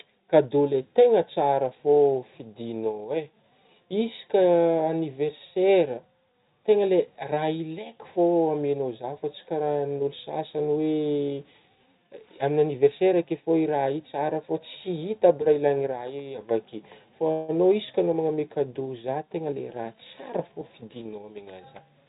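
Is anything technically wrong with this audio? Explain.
Yes. At 17.32 to 17.50 s there is a call audio freeze, likely caused by packets stalling in transit until the jitter buffer ran dry. The receiver stretched the last sound into a brief fading buzz or hiss lasting about 164 ms. The speech then resumes where it left off, with nothing lost but that much added delay.

Jitter buffer speed-up follows at 19.40 to 19.94 s and again at 20.39 to 21.32 s. With excess audio queued, the receiver trimmed short pitch-period slices repeatedly, roughly 70 ms and then 100 ms in total. The speech plays at 112% and then 108% speed at unchanged pitch, so it sounds hurried. Throughout, the audio stops at 4 kHz, consistent with a narrowband telephone codec.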